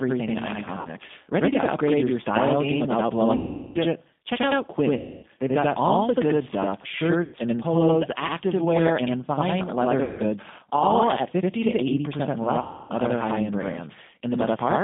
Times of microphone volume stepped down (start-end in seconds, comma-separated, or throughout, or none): none